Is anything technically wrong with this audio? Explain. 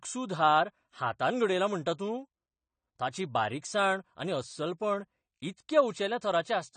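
Yes. Throughout the speech there is audible AAC compression damage: nothing sounds above about 9 kHz, and the sibilants and sustained vowels have a fizzy, warbling smear. This is likely low-bitrate AAC-LC, consistent with roughly 32 kbps, where the encoder drops the top band and starves frames of bits. Unlike a plain low-pass filter, it also leaves gaps and a swirly texture inside the remaining band.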